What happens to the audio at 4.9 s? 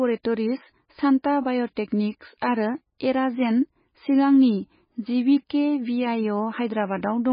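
At 4.9 s the speech carries the same damage heard throughout the clip, most likely MP3 compression at a very low bitrate, in the region of 17 kbps. The encoder has run short of bits, so the treble is cut off hard, leaving nothing above 5 kHz, and weak frequency lines drop in and out between frames. The result is dull, muffled speech with a watery, swirling texture, metallic chirps on s sounds, and smeared consonant onsets.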